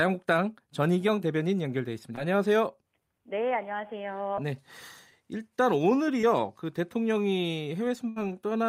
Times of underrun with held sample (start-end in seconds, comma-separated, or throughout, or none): none